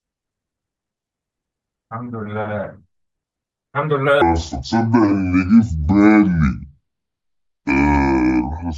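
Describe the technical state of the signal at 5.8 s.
A likely clock mismatch slows playback to 0.613 times the recorded rate in a section at the wrong speed, running from 4.22 s to the end of the clip and covering 5.8 s. Speed and pitch fall together, so the speech drops roughly ten semitones and drags, deep and slow.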